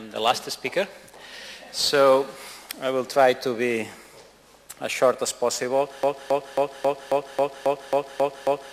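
A broken-record loop takes over at 6.03 s and runs to the end of the audio: a single fragment about 0.27 s long repeats exactly, back to back, ten times with no variation between passes. The likely cause is a stall in the player, encoder or stream that left it resending the last piece it held. Whatever sound should have followed 6.03 s never arrives.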